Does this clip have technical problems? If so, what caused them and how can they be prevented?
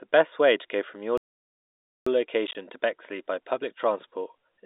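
Yes. The player likely ran short of data or was blocked, causing a playback stall: the speech goes silent from 1.18 to 2.06 s, nearly 0.9 s, then resumes. A larger playback buffer and a non-blocking audio thread would prevent this.

Lost packets were replaced with silence between 2.47 and 2.55 s, producing packet loss filled with silence: about 40 ms of holes, none longer than 20 ms, with hard edges. This fits 10 ms packets. Packet loss concealment or forward error correction at the receiver would smooth over such gaps.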